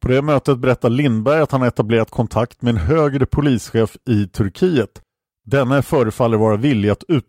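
From 3.83 s to the end, a resampler restarted on every block (the sound points to a 44.1 kHz to 48 kHz conversion). Each 10 ms block's edges get small errors, producing a 100 Hz buzz. Unlike mains hum, it is present only with speech and drops out in pauses.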